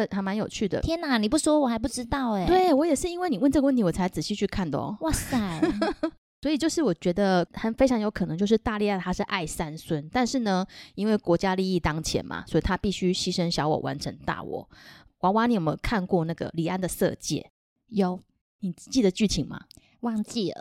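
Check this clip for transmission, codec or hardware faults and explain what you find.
Nothing in the recording points to a transmission, codec or hardware fault.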